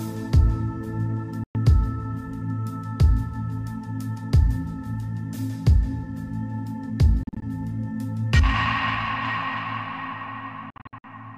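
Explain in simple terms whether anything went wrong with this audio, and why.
The sound cuts out three times. At 1.44 to 1.55 s it goes silent. At 7.23 to 7.42 s and 10.70 to 11.04 s it stutters through short gaps. Afterwards it carries on as if it never stopped. This is likely Bluetooth dropout: audio reached the headphones too late and was skipped.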